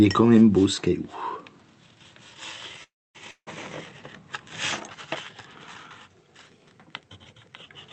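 Audio carried over a call link whose spectrum stops at about 8 kHz, which fits an Opus stream at a modest bitrate, has three audible faults. The first, from 2.83 to 3.17 s, is a call audio freeze. The last sound carries on briefly as a fading buzz and then gives way to about 0.26 s of silence. Playback then resumes where it stopped, so nothing is lost but everything after it is late by about 0.31 s. The cause is likely a packet delay that emptied the jitter buffer. On a spectrogram this shows as a short smear of repeated texture fading into a blank column. Shortly after, from 3.31 to 3.49 s, comes a long network dropout. A similar fading fill, ending in roughly 70 ms of silence, covers the gap, and this time about 0.16 s of audio never returns. The waveform shows a decaying tail, a flat stretch, and then a jump to later material. The cause is likely a run of lost packets. From 6.46 to 7.62 s the sound plays about 5.6% fast and sits about 95 cents sharp, close to a semitone, before snapping back to normal. 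This is a drift correction step, likely a clock-matching resampler adjusting its buffer in one jump. On a spectrogram the harmonics shift upward as a block and then drop back at 7.62 s.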